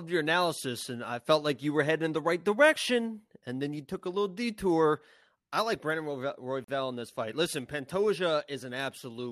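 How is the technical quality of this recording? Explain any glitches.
The recording has one clear glitch, a gap between stream segments from 6.64 to 6.68 s. Two consecutive segments' timestamps left a 40 ms hole, consistent with a 6-second segment boundary, which the player filled with silence. You hear a brief, hard-edged dropout in the speech, with nothing missing on either side. On a waveform it appears as a flat line with abrupt edges, and on a spectrogram as a narrow, fully blank vertical stripe.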